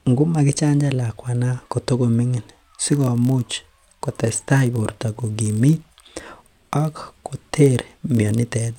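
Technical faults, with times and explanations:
2.85–8.78 s, block size mismatch (padded): each block the next stage reads, which fits a 1024-sample size, ends in zero-filled samples, so the speech carries a steady 43.1 Hz buzz. Unlike random dropouts, these gaps are evenly spaced, and pitch stays normal while playback slows barely 0.1%.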